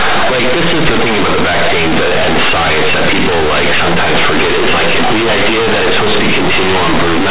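The speech is buried in very loud, harsh buzzing distortion from start to finish, and even the pauses are filled with strong noise. This is companded audio read as linear: the mu-law bytes of a G.711 telephone stream, whose band stops at 4 kHz, are being played as plain linear 8-bit samples without expansion. Every sign change throws the output across roughly half its range, so quiet passages come out as loud as peaks and the waveform is badly bent.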